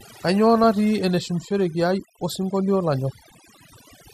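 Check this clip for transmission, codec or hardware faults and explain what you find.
Three faults are audible in this speech clip. Throughout, overdone noise removal drops quiet spectral bands wholesale, leaving near-silent gaps with twinkling specks, unlike codec dullness. Also throughout, a dull, gurgling, granular texture with flickering upper bands is likely MP2 compression, consistent with a low rate around 80 kbps. At 0.64 s, a brief burst of noise blips is DAB burbling: residual bit errors corrupt sub-band levels for a few frames, unlike the steady MP2 gurgle.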